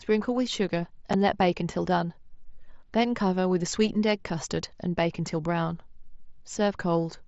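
A speech recording carried over a wideband mSBC Bluetooth headset link, which limits the audio to about 8 kHz. At 1.13 s there is unconcealed Bluetooth headset packet loss: a gap of about 7.5 ms, consistent with a single lost packet between headset and phone, was filled with silence or an idle pattern rather than concealed. The abrupt edges of that hole produce a brief break in the speech.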